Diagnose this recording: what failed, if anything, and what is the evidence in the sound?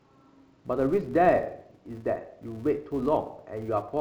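A filter restarted on every block in the processing stage: each block starts from silence, leaving a 200 Hz buzz throughout the speech that rises and falls with its level.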